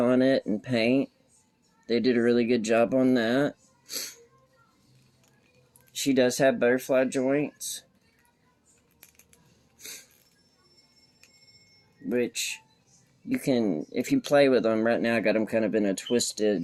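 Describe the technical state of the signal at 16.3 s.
The sender's clock runs about 2% slower than the receiver's throughout this clip, so at 16.3 s the jitter buffer is still draining steadily. The receiver has to keep stretching what arrives to avoid running dry, which leaves the timing subtly unsteady rather than audibly broken.

Those repeated timing corrections span 0.50 s to 16.41 s, so 16.3 s falls near their end. Playback effectively runs at 98% speed, with roughly a third of a second padded in over the whole stretch. Each repeated sliver is tiny, heard at most as a slight hiccup or wavering tempo.

Scattered short gaps also cover this moment, running from 15.33 s to 16.34 s. A few packets, around three, went missing or arrived late, each hole no longer than about 10 ms. The receiver filled them by extending the preceding sound, roughly 30 ms in total, leaving brief ticks or smears.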